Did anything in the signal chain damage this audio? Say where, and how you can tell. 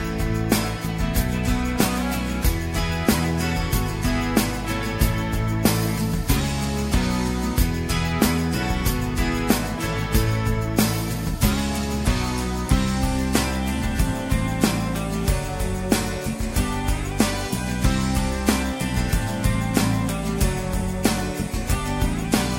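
Yes. The damage is at the codec stage: a corrupt frame decoded, heard from 3.17 to 3.21 s. A short burst, with error peaking around -15 dBFS, cuts across the audio for about 40 ms. Flipped bits in a few compressed frames made the decoder place energy at wrong frequencies.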